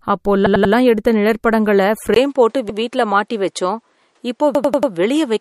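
The clip is speech, and the whole of it sounds watery and swirly. Nothing is heard above 15.3 kHz. That is likely MP3 compression, and the damage is plainly audible, which points to a low bitrate around 48 kbps. Repeated buffers cause stutters at three points. From 0.46 to 0.74 s, just before "எடுத்த நிழற்படங்களை", a 93 ms piece plays three extra times. At 2.69 s it repeats once. From 4.55 to 4.92 s it repeats four times. The length fits a 4096-sample buffer. At 2.14 s, right after "எடுத்த நிழற்படங்களை", there is a 20 ms silence. After it the sound turns duller to the end, with nothing above 11.4 kHz and new noise about 45 dB down. The likely cause is the input switching to a poorer device.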